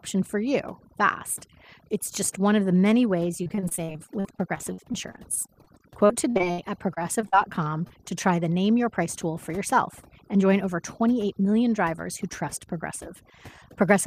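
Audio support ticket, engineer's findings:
Overdone noise removal, whole clip. Noise suppressor set too aggressive: frequency bands near its noise estimate pulled down hard or shut off, taking quieter parts of the speech with them. Result: lowered background breaking up into twinkling specks.

Repeated packet loss (robotic sound), 3.43–7.92 s. Network delivery failing: dozens of packet gaps, longest 63 ms, each concealed by extending the last sound, about 17% of the span. Result: choppy speech with short pieces missing, one patch after another.

Jitter buffer speed-up, 9.50–10.65 s. Receiver buffer overfilled, probably after a burst of late packets. Receiver cut around 70 ms in pitch-period slices to shrink the delay. Result: speech running at 105% speed, pitch unchanged, sounding hurried.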